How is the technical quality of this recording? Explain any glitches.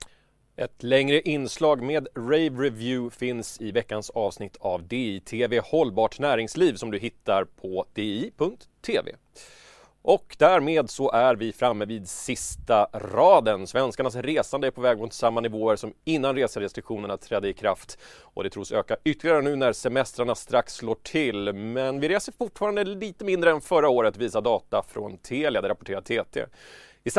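The technical quality of this recording holds up, with no glitches to explain.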